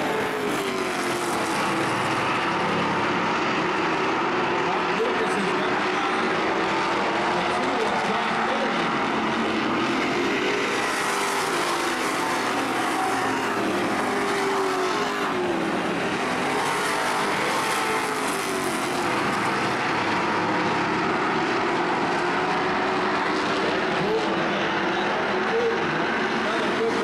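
No technical faults are audible.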